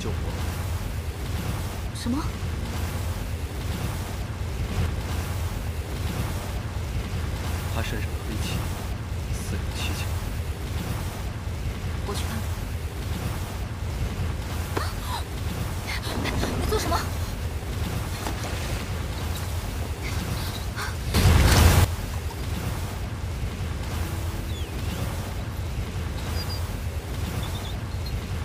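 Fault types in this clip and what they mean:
Sudden gain jump: a digital gain setting was likely applied instantly, from one sample to the next, with no ramp. In the audio, the sound and its background noise step up together by about 4 dB between 4.72 and 4.86 s, then by about 12 dB between 21.14 and 21.85 s. The second step is far more obvious, an abrupt loudness lurch rather than a natural swell.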